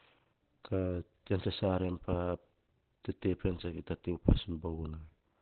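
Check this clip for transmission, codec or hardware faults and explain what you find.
There is one fault, and it runs through the whole clip.

Opus compression, from start to finish: the likely cause is Opus falling back from its full-band music mode to its narrowband speech coder at a very low rate, which fits a bitrate around 12 kbps. That coder models the voice compactly and discards the upper spectrum, so nothing is left above about 4.3 kHz. The speech sounds muffled, boxy and hoarse, with heavy coding damage roughening its texture.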